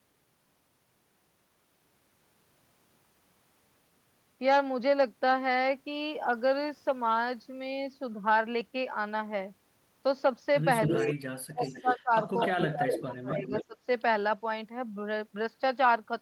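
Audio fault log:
10.84–11.13 s, 11.64–11.99 s, 12.40–13.01 s, 13.31–13.65 s: echo leak. A second copy of the speech trails it by 249 ms, only around 5 to 10 dB quieter. This is likely the far side's loudspeaker sound getting past its echo canceller. Unlike suppression, something is added rather than removed.
10.89–11.19 s, 11.41–12.12 s, 12.56–13.78 s: speech suppressed in double talk. During double talk, the main speech ducks by roughly 20 to 30 dB, most deeply around 11.4–12.1 s. This is likely the canceller attenuating both talkers at once. Here the speech thins or cuts out in pieces.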